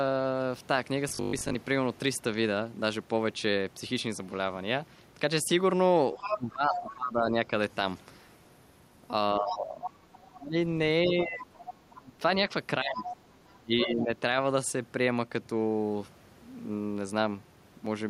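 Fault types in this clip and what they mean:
Robotic sound from repeated short buffers: From 1.09 to 1.55 s the speech turns into a rigid metallic buzz at 50 Hz. The likely cause is audio arriving too late, so the player loops a 20 ms stretch, repeating roughly half the material while the real audio is skipped.
Speech suppressed in double talk: Between 6.14 and 7.35 s, and again from 9.4 to 14.15 s, the talker dips by up to about 20 dB, about a second and two seconds in total. The likely cause is an echo canceller confused by both sides speaking, ducking everything.
Other side's voice leaking through: A second voice is audible at 6.23 to 6.94 s (about 5 dB below the speech), 9.5 to 10.26 s, 11.54 to 12.01 s and 13.04 to 14.04 s (about 10 to 15 dB down), likely loudspeaker playback the echo canceller failed to remove from the microphone.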